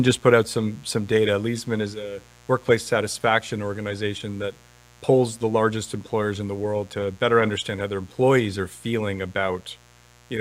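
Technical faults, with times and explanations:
Throughout: mains buzz. A steady, raspy buzz sits under the speech roughly 30 dB down, built on 60 Hz and its harmonics. Sharp switching spikes twice per mains cycle spread energy well up into the kilohertz range, which gives the buzz its harsh, gritty edge.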